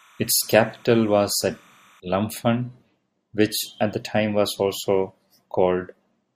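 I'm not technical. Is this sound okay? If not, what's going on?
No. From 0 to 2 seconds, a faint chirping warble sits behind the speech. This is timecode bleed, a sync signal leaking in from a nearby track or cable.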